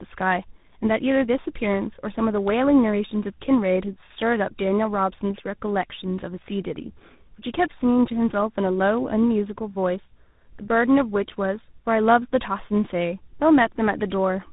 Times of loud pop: none

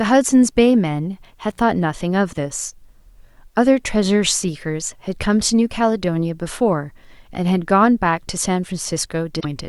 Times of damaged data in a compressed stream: 9.37-9.45

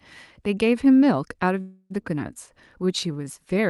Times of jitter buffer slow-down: 2.82-3.61

